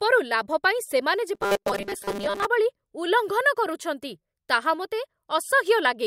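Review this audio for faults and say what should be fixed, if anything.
Between 1.35 and 2.45 s there is robotic sound from repeated short buffers. New audio was likely arriving too slowly, so the playback side kept looping its last short chunk while the real signal went missing. For most of that stretch the speech is replaced by a rigid, metallic buzz pitched at 200 Hz, which points to a chunk of about 5 ms being replayed over and over. The buzz still loosely tracks the syllables. To prevent it, give the audio path more buffering headroom or fix the upstream stall so fresh audio never runs short.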